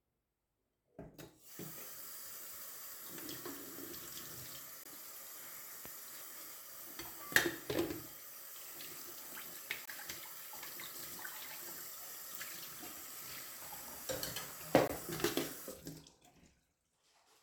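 At 4.84–4.86 s, 9.86–9.88 s and 14.88–14.90 s the sound drops into a 20 ms hole with abrupt edges: a gap between chunks. The audio was delivered in 5-second pieces, with silence left at every join while the sound itself stays intact. On the waveform these show as flat near-silent slivers with vertical edges; a spectrogram shows thin blank columns, often with brief broadband clicks at the edges.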